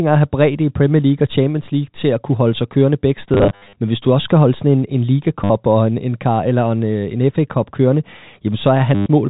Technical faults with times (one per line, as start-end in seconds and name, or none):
3.34-3.76 packet loss with last packet repeated
5.44-5.50 packet loss with last packet repeated
8.95-9.06 packet loss with last packet repeated